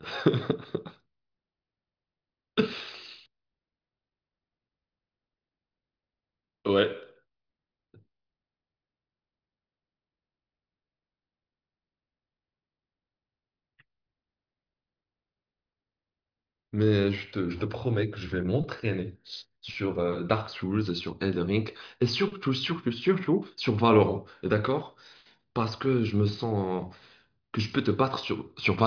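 No technical faults are audible anywhere in the speech recording.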